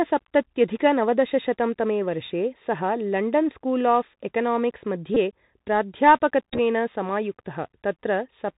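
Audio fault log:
throughout, Bluetooth CVSD headset codec: muffled, narrowband speech with scratchy s sounds and a granular hiss. The 64 kHz one-bit delta coding passes nothing above 4 kHz.
5.15 to 5.17 s, Bluetooth headset packet repeated: a brief buzz. About 19 ms of audio was replaced by re-decoded earlier data, which fits five lost packets.
6.53 to 6.59 s, Bluetooth headset packet repeated: a rough buzz near 267 Hz. Repeats scattered over 60 ms, the longest run around 10 ms, replaced about 34 ms of speech.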